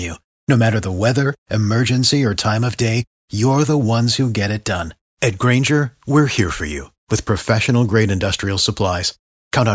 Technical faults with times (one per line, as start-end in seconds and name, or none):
none